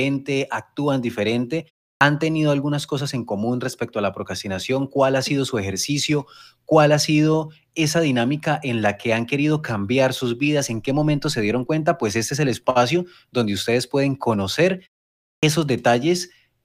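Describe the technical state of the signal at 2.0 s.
The output device idled during the 0.34 s pause after "actúan diferente" and needed time to wake, causing a clipped start after a pause from 1.96 to 2.01 s. About 49 ms is swallowed, so "tenido algunas cosas en" bursts abruptly from silence without its opening sound.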